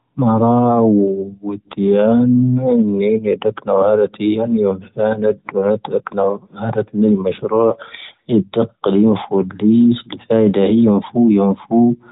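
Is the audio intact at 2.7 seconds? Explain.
Yes, the speech at 2.7 seconds is intact, with no fault at that moment beyond the narrowband sound of the AMR narrowband mobile codec carrying the clip.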